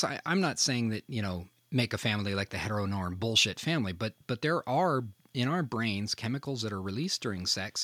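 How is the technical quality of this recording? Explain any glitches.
No technical faults are audible.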